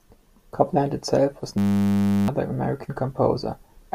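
Just after "itself was", at 1.58 s, a system hang loop takes over until 2.28 s. The playback side stalled while the hardware kept replaying its last buffer. One 10 ms slice of sound repeats about 70 times. Because the slice is so short, it fuses into a steady buzz at 100 Hz rather than a stutter. Roughly 0.7 s of real audio is lost under it. The buzz stops abruptly and the speech resumes.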